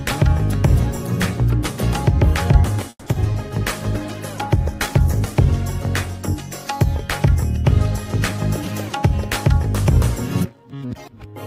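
Packets went missing four times in quick succession between 2.89 and 3.51 s, a burst of repeated packet loss. The receiver stretched the last sound to cover 210 ms and left 60 ms empty, with the longest gap 170 ms, so nearly half that span is concealment and the audio turns choppy with pieces missing. From 3.83 to 5.62 s a call bitrate drop hits: the bandwidth estimate collapsed and the encoder fell from 96 kbps to 12 kbps, staying at the bottom for 1.72 s, so the audio goes coarse, watery and dull, with its top end cut away until the rate comes back. Near the end the jitter buffer had built up too much delay and trimmed it by cutting out short pitch-period slices, a jitter buffer speed-up heard twice. From 8.60 to 9.29 s the audio runs at 108% with around 70 ms removed, and from 10.46 to 11.06 s at 113% with about a tenth of a second gone, so both stretches sound hurried while the pitch stays put.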